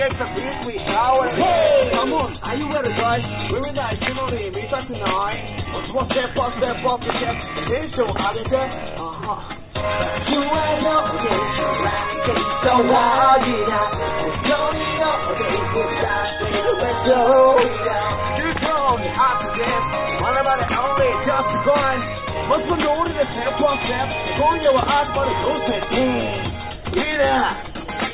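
No technical faults can be heard in this audio, so there are none to describe in time order.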